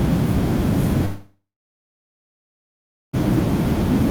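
From 1.05 s the speech dissolves into a fading buzz, then about 1.7 s of silence, before resuming at 3.15 s with roughly 2.1 s lost. This long network dropout likely came from audio that never arrived, so the receiver stretched the last sound before falling quiet.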